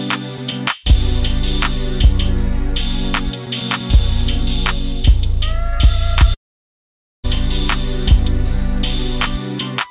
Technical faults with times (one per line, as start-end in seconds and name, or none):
6.34-7.26 long network dropout